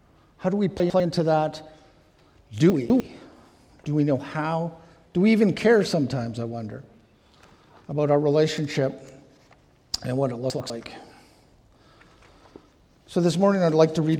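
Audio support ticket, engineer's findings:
Chunks out of order, three spots: 0.8–1.0 s, 2.7–3.0 s and 10.5–10.7 s. Each is a short jumbled stutter. Nothing's missing. A 100 ms chunk just lands late and plays after the audio that should follow it. It's one chunk late at the first and third spots and two chunks late around 2.7 s. Probably the buffering or reassembly stage writing blocks out of sequence.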